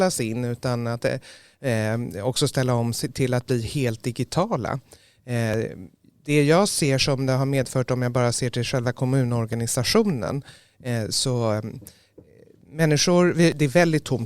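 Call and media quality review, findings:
Overlap between stream segments: short clicks or tiny skips in the speech at 5.54 s, 9.53 s and 13.52 s, spaced almost exactly 4 s apart, which fits 4-second segment boundaries. Probable component is the segmenter or player stitching. Neighbouring segment timestamps overlap, so the player trims audio that was never actually duplicated. A few milliseconds go missing and the waveform jumps at each join.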